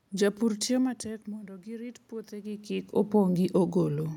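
Automatic gain rising, from 1.03 to 2.97 s: at about 1 s the talker moves away from the microphone and the input drops by about 15 dB. The automatic gain control reacts by raising its gain by about 5 dB over nearly two seconds. The speech and the room noise behind it swell upward together in a slow, steady lift rather than a jump, and that lift recovers only part of the lost level.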